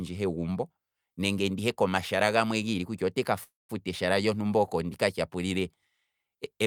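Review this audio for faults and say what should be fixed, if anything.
Call audio freeze from 3.43 to 3.71 s: the last speech sound stretches into a fading buzz and then 170 ms of silence, and all later audio runs 257 ms late. The likely cause is delayed packets emptying the jitter buffer. On a spectrogram it looks like a flat smeared band followed by a blank strip; on a waveform, a decaying tail and then a flat line. A larger or adaptive jitter buffer and a less congested network path would prevent it.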